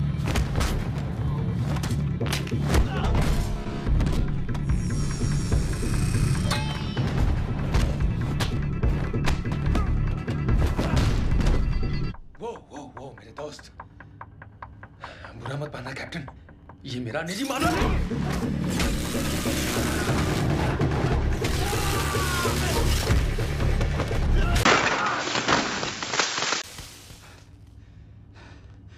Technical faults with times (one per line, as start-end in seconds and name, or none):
24.63-26.64 input switched to a poorer device